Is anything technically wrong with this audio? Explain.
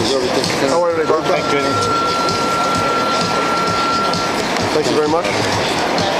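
No, nothing technically wrong can be heard here.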